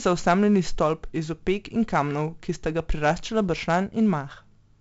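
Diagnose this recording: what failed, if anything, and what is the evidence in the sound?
A gritty hiss rides on the speech from start to finish, rising and falling with its loudness, and sharp onsets come out rough and distorted. Nothing is heard above about 7.7 kHz, so the sound is dull. The fault is in the codec stage: heavy 4-bit ADPCM compression, which fits a 64 kbps stream. Each sample is coded as a coarse step from a prediction, so quantisation noise follows the signal level, and the adaptive step size lags on fast attacks.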